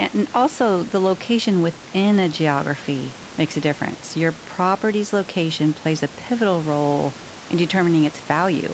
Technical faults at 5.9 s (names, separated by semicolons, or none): none